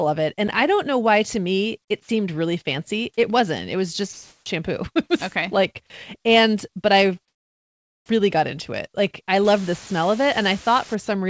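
From 4.13 to 4.46 s, for about 330 ms, the quiet background between phrases is replaced by a flat, featureless noise, with a level shift of about 2 dB against the surrounding room sound, which sits about 58 dB below the loudest speech. This is comfort noise in place of the background, likely from discontinuous transmission stopping the stream while no speech was detected and the receiver synthesising noise to fill the gap. A dropout would leave true silence or a click. Here the gap is filled with smooth noise that has none of the real background's detail.

From 9.45 to 10.95 s, a constant, even hiss sits under the speech, which points to low bit depth with dither at around 6 bits. Rounding to so few levels would normally give gritty, signal-following distortion, but the added dither turns that error into steady white noise at roughly 15 dB below the signal. The hiss does not rise and fall with the speech the way codec noise or clipping would.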